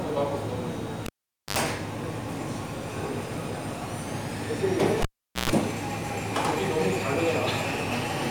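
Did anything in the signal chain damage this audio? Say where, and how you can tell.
Yes. A cable was pulled and plugged in twice, in the analogue wiring. Pops at 1.06 s and 5.02 s cut the sound. The tip touched before the ground, so mains buzz leaked in: 50 Hz for 70 ms, then 60 Hz for 124 ms. Pops at 1.57 s and 5.50 s restore it.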